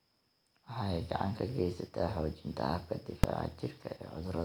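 This is a speech clip with one loud bang at 3.24 s. It comes from invalid numbers at full scale. A calculation went to infinite or invalid values, which were clamped to the largest sample value. The output was pinned at one extreme value, far beyond the speech peaks, for about 2.7 ms. That fits a 128-sample block. A block this short is heard as a single sharp bang.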